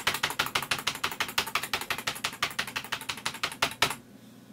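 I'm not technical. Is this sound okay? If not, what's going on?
No. At 1.87 to 1.89 s there are lost LE Audio frames, likely two. For about 15 ms, the receiver fills the gap with a brief noisy smear.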